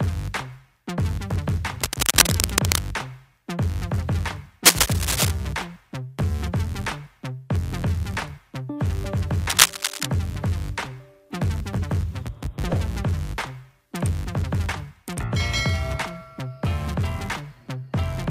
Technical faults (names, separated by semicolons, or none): cable scratch noise